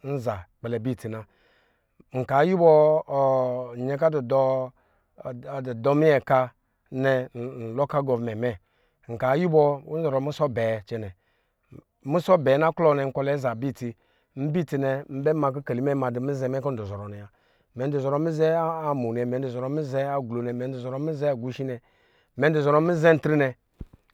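Speech, with no technical fault audible anywhere in the recording. There is nothing to locate in time and no cause to point to.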